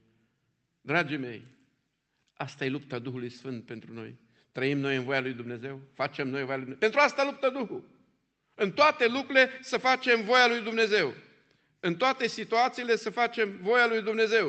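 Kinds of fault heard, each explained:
No faults are present in this speech clip: it has passed through a WebRTC call path that behaves as designed, with the usual coding texture of a call codec and high frequencies rolling off around 8 kHz, which fits Opus at a modest bitrate.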